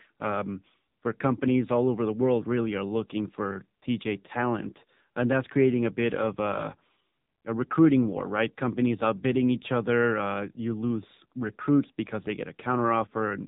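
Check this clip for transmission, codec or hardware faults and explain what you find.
One codec fault is present. AMR narrowband mobile codec, throughout: 8 kHz sampling cuts everything above 3.8 kHz, and heavy damage to the pulse-driven vocal-tract coding gives buzzy, synthetic speech, which fits a low mode near 6.7 kbps.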